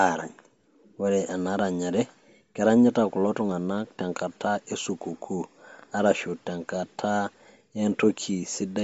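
Throughout the clip, the speech has a breathy, grainy edge. Nothing is heard above about 7.7 kHz. The cause is likely Bluetooth LC3 compression at a low bitrate, near 32 kbps. The codec drops much of the upper band and fills the gaps with noise.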